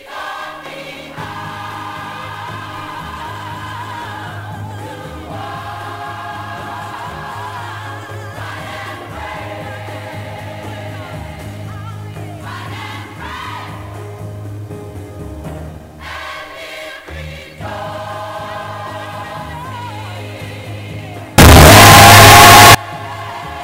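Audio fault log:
21.38–22.75 s, signed and unsigned mixed up: the sound abruptly turns into very loud, harsh distortion, with quiet moments as loud as everything else. Likely the 8-bit samples were read with the wrong sign convention, flipping the top bit so every zero crossing leaps across the full range.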